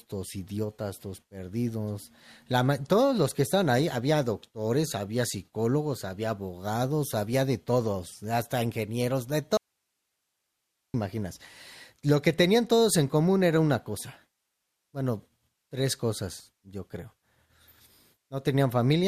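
At 9.57 s the speech cuts out abruptly and stays gone until 10.94 s, an audio dropout to a faint residue lasting about 1.37 s. Only hiss fills the gap, roughly 55 dB below the speech, so the path stayed live while the signal was most likely lost upstream. On a waveform the envelope collapses to a thin noise band with hard edges. A spectrogram shows the harmonics vanishing into an even, low-level noise floor.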